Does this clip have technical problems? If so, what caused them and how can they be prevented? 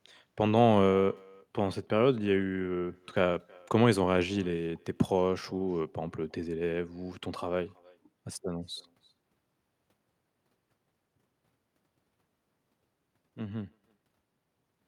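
Yes. The far end is playing the call through a loudspeaker, its microphone picks that playback up, and no echo canceller strips it out, so the talker's own speech returns after the network round trip: echo with no canceller. Throughout the speech, every phrase is trailed by a faint copy roughly a third of a second later, sitting about 28 dB below the direct sound and sounding thinner. Enabling acoustic echo cancellation on the far-end device, or having that participant use headphones, would prevent it.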